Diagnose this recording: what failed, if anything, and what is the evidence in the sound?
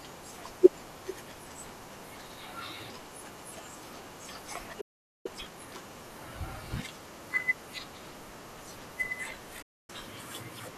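The playback stage stalls at 4.80 s: the speech stops mid-flow and the output stays silent for about 0.44 s, until 5.26 s, then resumes. That pattern points at the player's buffer or driver path, most likely the output running dry or its audio thread being blocked.

Immediately after the stall, from 5.26 to 5.68 s, there is time-compressed catch-up. For about 0.42 s the speech runs at double rate with its pitch unchanged, as the player drops short segments and cross-fades the joins to work off the backlog the stall created. This is a playback-side recovery behaviour, and it ends once the queue is back to its normal depth.

A digital broadcast dropout occurs at 9.62 s. The audio fades out over about 8 ms, stays muted until 9.90 s, and returns further along in the programme, so roughly 264 ms of material is gone rather than delayed. That fits the receiver discarding a short run of corrupt or missing frames, around eleven, and muting until clean frames decode again. 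This fault sits in the reception and codec stage.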